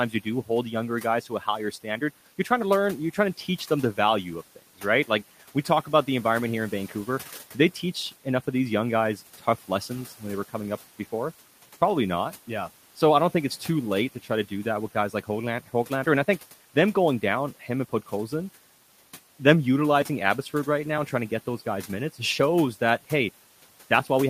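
Speech cut by the noise suppressor at 1.22–1.47 s after "younger guys", 1.71–2.02 s, and 9.38–9.69 s before "lessons when they were": quiet bits mistaken for noise, ducked about 10–12 dB, sounding swallowed.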